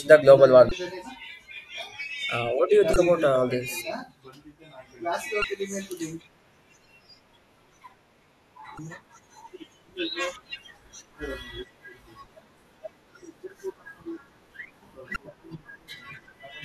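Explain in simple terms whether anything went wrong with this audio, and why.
Damaged data in a compressed stream: parts of the speech file were corrupted, so the decoder misread those frames and lost its place. Each spot gives a brief chirp or glitch lasting about 0.03 seconds, at 0.68–0.72, 2.93–2.96, 5.41–5.44, 8.75–8.79 and 15.13–15.16 seconds.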